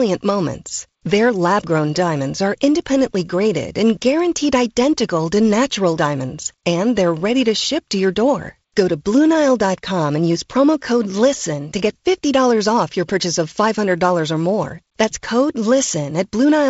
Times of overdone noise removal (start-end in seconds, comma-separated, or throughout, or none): none